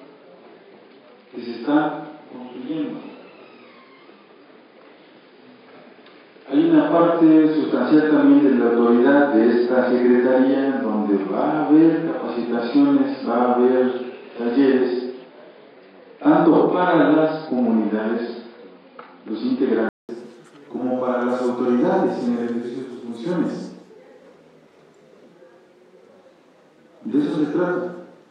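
From the start to 20.09 s, the sound is dull and boxy. Nothing reaches above 5 kHz, so the top end is missing. This is likely an input switched to a poorer device, such as a second microphone or a headset's call profile. That path carries its own faint background noise, well below the signal, and sits a few decibels apart in level. At 20.09 s, a 200 ms silence marks the switch back, and the full bandwidth returns.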